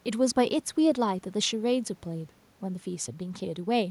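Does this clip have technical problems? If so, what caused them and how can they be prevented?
No, no technical faults are audible in this speech clip, so there is nothing to trace to a cause or prevent.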